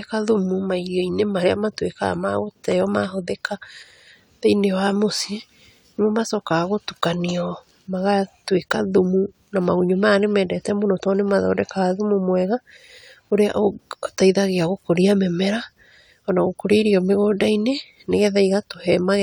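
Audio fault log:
Nothing to log here, since this speech recording comes through without a single fault turning up anywhere along the way.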